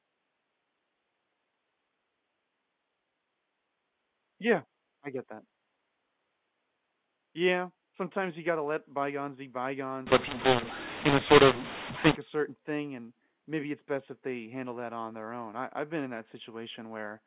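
Telephone-band speech, with nothing heard above 4 kHz, which fits 8 kHz G.711 coding. From 10.07 to 12.15 s, after "gotta let bygones be", mu-law and A-law are mixed up. Mu-law samples are decoded as A-law. Levels scramble, the speech turns harsh and distorted, and the gaps fill with noise. Clean sound returns by "a certain thing and".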